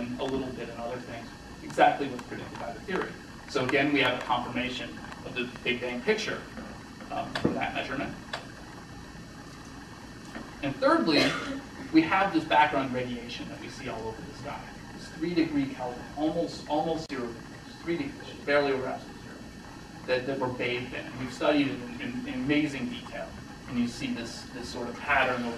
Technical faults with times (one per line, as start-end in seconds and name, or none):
none